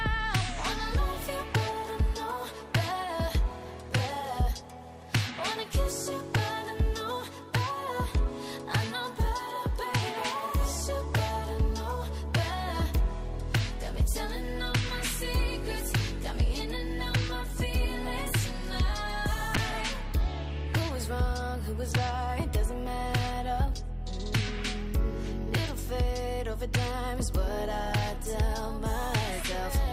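A call bitrate drop runs from 19.57 s to 24.77 s, and the audio stays at its degraded low point for about 5.1 s of that stretch. The call's bandwidth estimate fell, so the encoder was told to spend far fewer bits. It coded the sound more coarsely, and the audio turns rough and less detailed. That coarsening fits a fall from a 64 kbps stream to 27 kbps, before the bitrate recovers at about 24.8 s.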